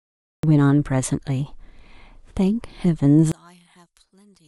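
The opening 0.43 s is dead digital silence, and at 0.43 s the speech bursts in already mid-sound, with no rise or breath leading into it. This is a cut-off start: capture or streaming began late, so the first moments of the utterance were never recorded. Instead of a natural attack, the waveform jumps straight from silence to an ongoing signal, producing an abrupt, clipped entry.

From 3.32 s to the end, the speech collapses by about 36 dB and turns into a faint trace, with the centred voice almost entirely gone. The likely cause is one channel inverted: with one stereo side in reversed polarity, summing to mono cancels everything the two channels share. Because the voice sits equally in both, only the tiny difference between them survives.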